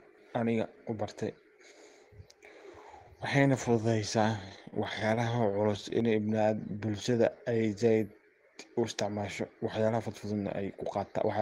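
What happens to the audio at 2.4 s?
Nothing goes wrong at 2.4 s: the speech carries on cleanly through that moment, with no dropout, click, glitch or other audible fault.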